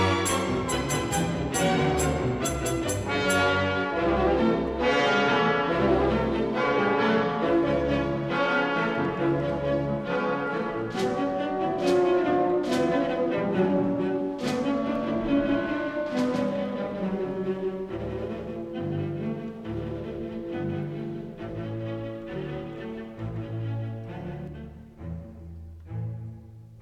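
From 14.95 s to 24.47 s the audio carries a doubled audio track: a second, full-band copy of the same sound trails the original by roughly 150 ms at about 5 dB lower level. It has no decay or room colouring, so it reads as a hard slapback rather than reverb, and it cuts in and out abruptly at those times. The likely cause is the signal being captured twice, once through a slower path.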